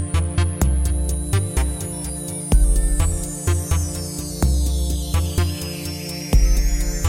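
Nothing stood out as a technical problem on listening.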